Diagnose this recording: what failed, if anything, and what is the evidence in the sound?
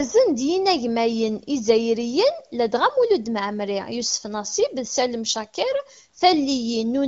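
Nothing failed in this recording, and the sound gives no evidence of a fault at any stage.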